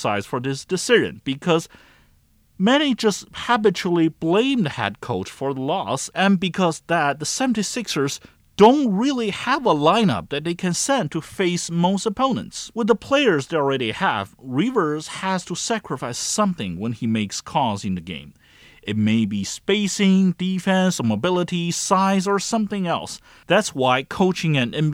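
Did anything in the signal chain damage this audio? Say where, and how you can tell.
No, nothing along the way from capture to playback has left any audible damage in this speech, so there's nothing here to trace back to a stage.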